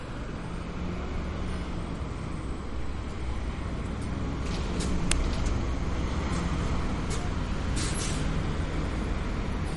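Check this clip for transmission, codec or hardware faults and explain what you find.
Two faults are audible: a low-bitrate codec sound through the whole clip and one brief burst of garbage near the middle.

Throughout, nothing is heard above 11.2 kHz, and the remaining detail swirls and chirps, plainly audible as MP3 compression, likely around 45 kbps. The encoder drops weak frequency lines that flicker between frames. Unlike plain low-pass filtering, that leaves a watery, unstable texture.

At 5.12 s a single click-like burst of harsh digital noise, under 3 ms long, is an uninitialised buffer: stale memory played as samples, which fits a 128-sample buffer. Unlike a dropout or ordinary click, it is loud, noisy and unrelated to the surrounding sound.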